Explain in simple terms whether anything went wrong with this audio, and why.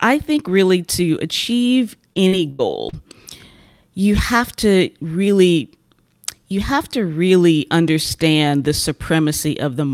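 Repeated packet loss (robotic sound) from 2.13 to 2.95 s, right after "think really to achieve". Short gaps, up to 90 ms, get patched, sounding choppy.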